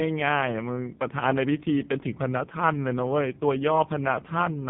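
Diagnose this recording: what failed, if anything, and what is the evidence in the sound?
Codec stage: the speech is cut off above 3.8 kHz throughout and sounds buzzy and synthetic, which fits the AMR narrowband mobile codec's 5.15 kbps mode.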